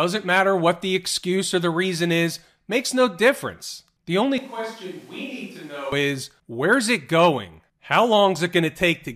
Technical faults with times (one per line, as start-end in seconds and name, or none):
4.38-5.92 switch to a distant microphone